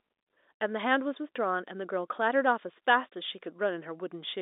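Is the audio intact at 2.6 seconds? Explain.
Yes, the speech at 2.6 seconds is intact, with no dropout, click or distortion, only the narrow telephone band of the G.711 line coding.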